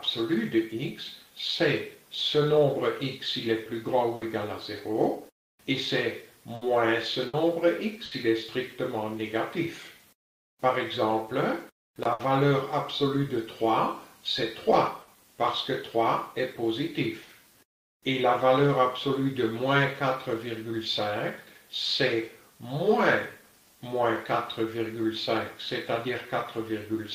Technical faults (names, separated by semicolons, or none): burst of packet loss